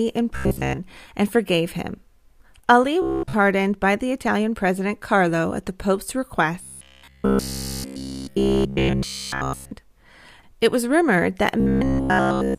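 Robotic sound from repeated short buffers appears at 0.36 to 0.79 s, 3.02 to 3.34 s, 6.63 to 9.71 s and 11.60 to 12.58 s. The speech turns into a stiff metallic buzz locked at 66.8 Hz, which points to a roughly 15 ms chunk being replayed, likely because fresh audio arrived too slowly. Unlike gaps or stutter, nothing falls silent: the real audio is overwritten, mostly in the first stretch and almost entirely in the later three.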